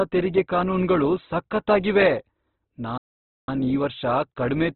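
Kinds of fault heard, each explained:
Opus compression: The speech sounds rough and grainy, with nothing above about 4 kHz. This is likely heavy Opus coding at a low rate, which fits roughly 12 kbps.
Playback stall: The speech falls silent from 2.98 to 3.48 s, about half a second. It resumes at "ಈ ವರ್ಷ". The likely cause is the player running out of data.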